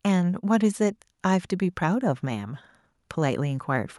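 No technical faults are audible anywhere in the recording.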